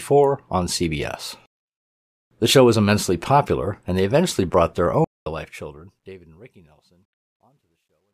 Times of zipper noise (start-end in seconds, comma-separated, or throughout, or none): none